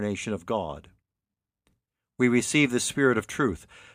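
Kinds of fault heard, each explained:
No kinds of fault are heard.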